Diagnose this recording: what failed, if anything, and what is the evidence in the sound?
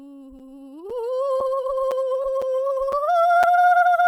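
Gap between chunks at the playback stage: the music arrives in 0.5 s chunks, likely with each one started late by the player, leaving 6.5 ms holes at 0.39, 0.90, 1.40, 1.91, 2.42, 2.92 and 3.43 s.

Short concealed packet loss on the network: 20 ms never arrived, and the decoder extended the preceding sound to cover it, heard as a brief smear from 2.22 to 2.26 s.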